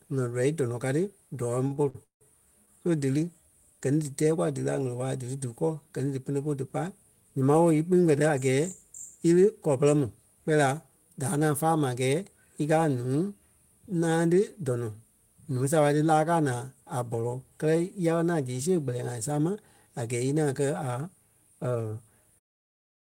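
From 1.67 to 2.22 s the speech stalls five times in quick succession, a repeated stalls (stutter) pattern. Packets reached the receiver late, so its jitter buffer kept running dry, and each time it stretched the last sound to fill the wait. The longest wait is 174 ms, and these fills total 294 ms, more than half of that span. Nothing is actually lost, which separates this from packet loss: the speech drags and hiccups rather than dropping pieces.

Two stretches later run noticeably quick at unchanged pitch, the mark of a jitter buffer speed-up. From 13.95 to 14.64 s the rate is 109%, with roughly 70 ms taken out. From 21.67 to 22.10 s it is 111%, with about 50 ms removed, just before the fade-out that begins at 22.4 s. In each case the buffer had built up surplus delay and trimmed many tiny pitch-period slices to catch up. Unlike a resampling error, the voice doesn't rise in pitch; it only sounds hurried.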